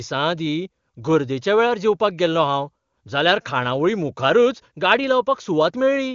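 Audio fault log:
No faults are heard in this speech. It has gone through the AMR wideband (HD Voice) codec, whose faint-at-most coding traces fit its highest rate of 23.85 kbit/s.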